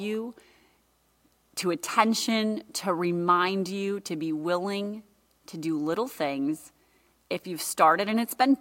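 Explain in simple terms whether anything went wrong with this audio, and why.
Nothing went wrong; the speech comes through normally.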